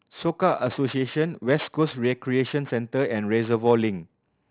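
Aliasing runs through the whole clip. The speech was resampled to a lower rate with no anti-aliasing filter first, and the folding point sits at 4 kHz, which fits a drop from 16 kHz to 8 kHz. Energy that lay above 4 kHz mirrors back below it to pitches unrelated to the voice, sitting roughly 20 dB under the speech. Sibilants come out gritty and metallic, and the spectrum stays full right up to the 4 kHz edge.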